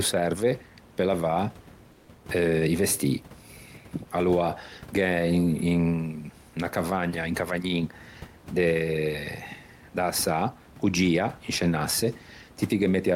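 At 1.92 s to 2.08 s, for about 160 ms, the room noise that sits roughly 25 dB under the speech gives way to a smooth, featureless hiss about 3 dB quieter, which then returns to the real background. This is comfort noise in place of the background, likely from the sender's discontinuous transmission, consistent with Opus DTX, halting packets during the pause while the receiver synthesises noise shaped only roughly like the room.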